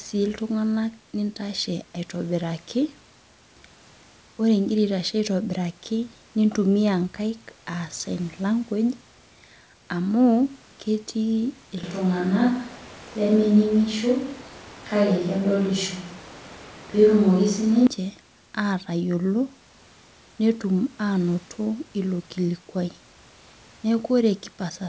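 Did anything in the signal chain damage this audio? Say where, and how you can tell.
Yes. From 11.84 to 17.87 s the speech turns hollow, roomy and thin in the bass, with louder background noise. The likely cause is a switch to a distant microphone at capture.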